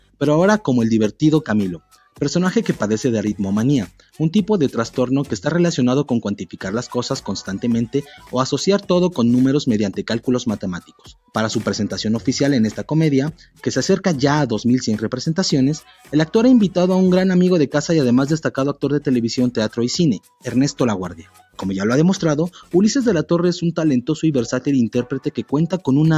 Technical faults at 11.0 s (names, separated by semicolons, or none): noise suppressor applied to music or sounds; sound cut by the noise suppressor